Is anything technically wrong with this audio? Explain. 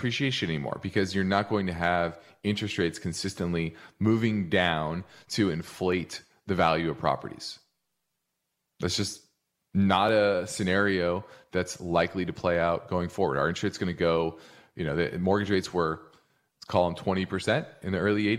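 Yes. The speech contains two blocks of digital silence. The first is at 5.92 s, after "consistently moving down to" and before "the value of properties". It lasts about 0.23 ms. The second is at 10.09 s, between "just not" and "a scenario that's likely". It lasts 1.33 ms, which is 64 samples. In each case the output was likely not filled in time, so zeros replaced the samples. The waveform drops to near silence and back abruptly. Both are heard as a tick or dip, not as silence.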